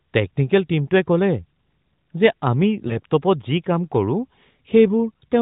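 A speech recording carried over a narrowband mobile link, with nothing above 4 kHz. From 2.88 to 2.98 s the voice briefly dips or warbles before returning weak or rough for a moment. These are lost AMR speech frames: a single corrupted 20 ms frame failed its check, so the AMR-NB decoder patched the gap by reusing the previous frame's pitch and vocal-tract settings at reduced gain, then took a moment to recover.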